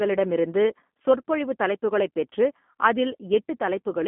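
G.729 codec damage runs throughout this speech clip: nothing passes above 3.6 kHz, and a rough, synthetic texture fits an 8 kbit/s G.729 stream rebuilding each frame from a few pulses.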